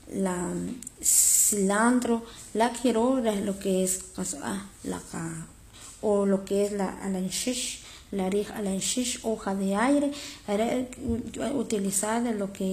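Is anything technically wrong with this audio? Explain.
Yes. Throughout the speech, the upper treble sounds synthetic rather than recorded: sibilants come out gritty and metallic, and nothing is present above 14.9 kHz. The likely cause is HE-AAC compression at a low rate, which fits a bitrate around 24 kbps. The codec keeps only the lower spectrum and regenerates the top by copying lower bands upward under a coarse envelope. Those copied harmonics don't align with the real ones, so the damage is plainly audible.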